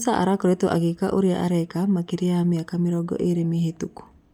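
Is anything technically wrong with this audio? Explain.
Yes. Throughout the speech, Bluetooth LC3 compression is likely at work, consistent with roughly 48 kbps in 10 ms frames, zeroing upper-band detail and filling it with synthetic noise. The result is a plainly audible breathy, grainy edge on the voice, though content extends to about 20.2 kHz.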